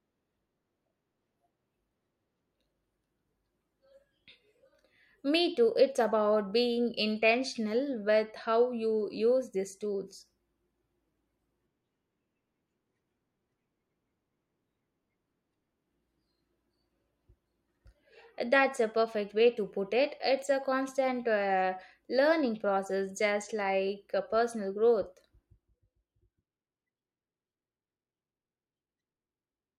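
The clip is speech, and nothing is technically wrong with it.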